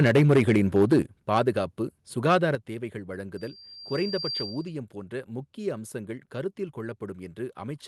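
From 0 to 0.99 s the loudest syllables crackle with flattened tops, likely microphone overload driving peaks about 8 dB past the converter's limit, clipping roughly a tenth of samples. At 1.02 s everything drops about 7 dB at once, which sounds like the call software stepping the microphone volume down. The overload crackle returns more mildly from 1.35 to 1.48 s, about 2 dB over. Then at 2.55 s there's another drop of about 7 dB, a second microphone volume step down. From 3.37 to 4.78 s a loudspeaker feedback squeal appears. A 4.7 kHz tone swells over about a second until it's roughly as loud as the speech, then stops just before "போன்ற முக்கிய அம்சங்கள் கருத்தில்". The microphone was picking up its own loudspeaker, and the loop kept reinforcing that one frequency.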